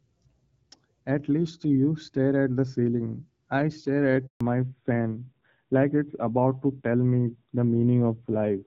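A call handover opens a handover gap in this speech recording: while the link switched networks, no speech frames arrived, so the voice dies away right after "the ceiling I stare" and stays silent for 140 ms, from 4.27 to 4.41 s, with that stretch of speech lost. From 4.41 s to the end, a fallback to narrowband takes over. The call drops out of HD Voice, whose opening section sounds like AMR-WB near 12.65 kbit/s, into an older narrowband codec. Everything above 4 kHz is gone, and the rougher, duller tone fits AMR-NB at around 7.4 kbit/s.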